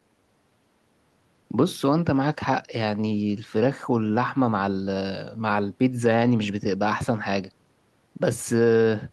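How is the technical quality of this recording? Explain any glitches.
No audible technical faults.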